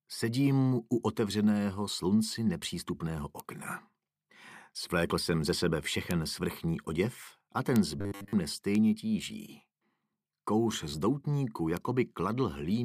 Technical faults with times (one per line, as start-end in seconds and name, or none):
3.40 bit error spike
6.11 bit error spike
7.76 bit error spike
7.99-8.33 robotic sound from repeated short buffers
8.75 bit error spike
11.03 bit error spike
11.77 bit error spike